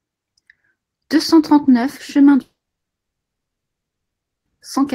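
At 2.41 s the stream most likely suffered a long network dropout: no audio arrived for about 2.04 s, and the receiver had nothing to play. It briefly stretched the last sound into a fading buzz or hiss, then fell to silence for about 1.93 s. The speech resumes at 4.48 s, but the stretch that went missing is gone for good, so the speech jumps ahead rather than picking up where it stopped.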